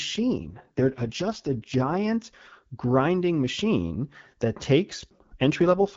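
From 0.42 to 2.02 s the speech turns rough and raspy, then clears. It returns at 5.61 s and lasts to the end. Both are AMR rate drops. The sound fits the AMR wideband codec stepping down from 12.65 to 6.6 kbit/s. The band stays full, with no gaps.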